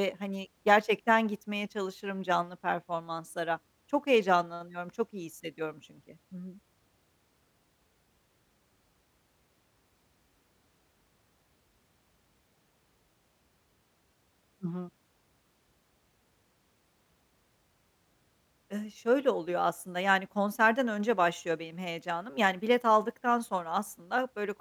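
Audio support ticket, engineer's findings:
Nothing stood out on listening to the speech recording.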